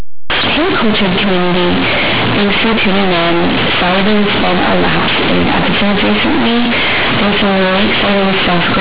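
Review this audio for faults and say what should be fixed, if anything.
Companded audio read as linear, throughout the whole clip: the speech was encoded as A-law, but the bytes are being played back as plain linear 8-bit samples with no expansion step. Every sign change now throws the output across roughly half its range, so quiet passages come out as large as loud ones and the waveform is badly warped. The result is harsh, very loud, buzzy distortion with heavy noise filling the pauses, sitting on top of an 8 kHz-sampled telephone-band signal. To prevent it, make sure the player or converter tags and decodes the stream as A-law G.711 rather than raw 8-bit PCM.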